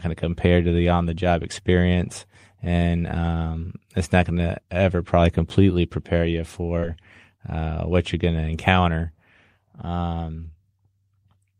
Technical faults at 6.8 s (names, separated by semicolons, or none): short concealed packet loss